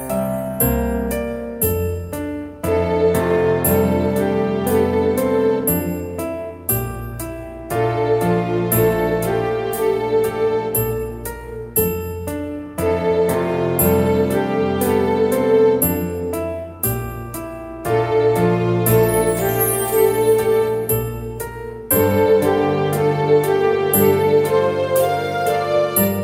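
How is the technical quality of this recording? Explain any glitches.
No glitches or technical faults can be heard anywhere in the recording. There is nothing that needs explaining.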